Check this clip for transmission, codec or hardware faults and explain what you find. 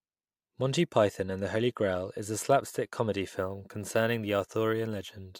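One fault is present: crude rate conversion, from 3.35 s to the end, just after "is slapstick comedy". The sample rate was raised by a 2:3 ratio, which fits a 32 kHz to 48 kHz step, by repeating the nearest sample instead of filtering. The repeated samples form a regular error pattern about 25 dB below the speech. It sounds like a gritty, inharmonic fizz riding on louder and brighter sounds. A spectrogram shows faint mirrored images above the original band, and the waveform zoomed in shows small staircase steps.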